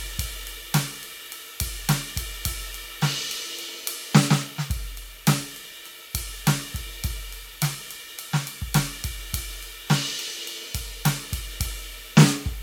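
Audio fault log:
Throughout: generation loss. The music is swirly, hollow and smeared, with blurred attacks and nothing above 19.9 kHz, likely from about seven MP3 passes near 128 kbit/s.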